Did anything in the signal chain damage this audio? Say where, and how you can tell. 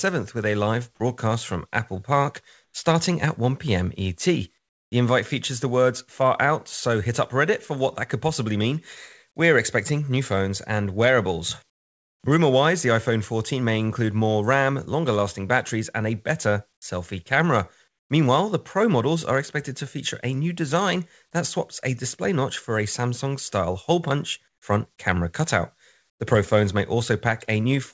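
Yes. At the call-processing stage, comfort noise replaces the background at 2.64–2.74, 4.58–4.92, 11.70–12.24, 16.74–16.82, 17.88–18.10, 24.48–24.62 and 26.10–26.20 s. The faint real background, about 48 to 56 dB below the loud passages, becomes steady featureless hiss about 5 to 18 dB quieter, likely from discontinuous transmission. Unlike a dropout, these gaps are never silent.

The onset is clipped by the voice detector at 16.80 s. Sound resumes abruptly out of the comfort-noise patch, its first 20 ms missing, likely because the detector was slow to flag renewed activity. A fade or gate would soften the start, not delete it.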